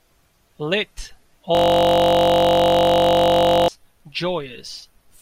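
From 1.55 to 3.68 s the speech freezes into a system hang loop, a 21.33 ms slice repeating, giving a steady 46.9 Hz buzz: identical waveform cycles, evenly spaced spectrogram stripes.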